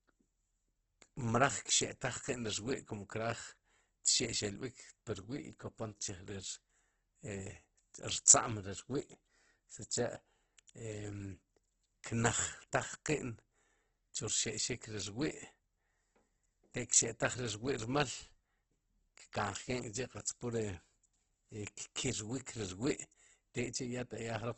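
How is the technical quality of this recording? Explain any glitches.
The recording is heavily degraded by lossy coding across its full length. Opus compression, throughout: the sound has nothing above 8.1 kHz, and its rough, grainy, noisy texture likely comes from the encoder filling starved bands with folded or synthetic energy at very low bitrate, consistent with about 12 kbps.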